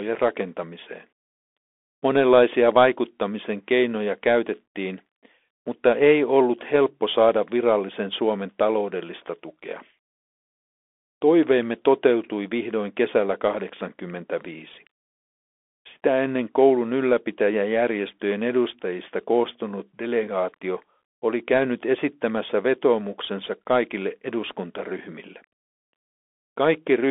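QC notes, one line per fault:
throughout: Bluetooth CVSD headset codec. Speech sits in a 300 Hz to 3.5 kHz band with nothing above 3.7 kHz. The coarse one-bit delta coding, which fits 64 kbps CVSD, audibly roughens sibilants, distorts loud bright passages and leaves a granular hiss underneath.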